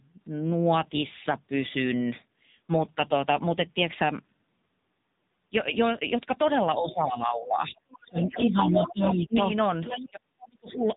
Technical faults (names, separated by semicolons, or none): AMR narrowband mobile codec; speech suppressed in double talk; other side's voice leaking through